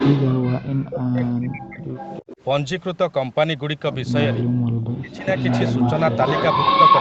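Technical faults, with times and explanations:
0.00–1.92 s and 4.98–5.26 s, speech suppressed in double talk: the speech sinks by about 40 dB at its deepest, for roughly two seconds at the start and a few tenths of a second later. This is likely an echo canceller that, with both sides talking at once, could not tell the near talker from the loudspeaker echo and turned the whole signal down.
1.25–1.29 s, 1.94–2.41 s, 5.36–5.93 s and 6.09 s to the end, echo leak: a copy of the speech returns 320 ms late. It starts as a brief scrap about 20 dB down, rises to about 15 dB down, then matches the speech level, and in the final stretch is slightly louder than it. This is likely a loudspeaker-side echo canceller failing to remove what its microphone picked up, so the residue was sent back down the call.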